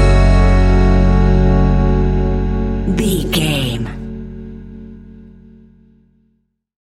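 No technical faults can be heard anywhere in the clip. Nothing interrupts or alters the sound at any point, so there is nothing to place in time.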